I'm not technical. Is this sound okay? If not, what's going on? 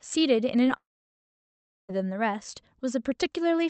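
No. At 0.65 to 0.69 s there is a short concealed packet loss. A tiny piece of the call arrived too late. The receiver guessed at the missing bit by stretching the sound just before it. You hear a brief smear or wobble.

Then, from 0.77 to 1.91 s, the speech cuts out. There is a quick fading buzz, then about a second of near silence. The speech returns further on, with that stretch simply gone. This is likely a long network dropout.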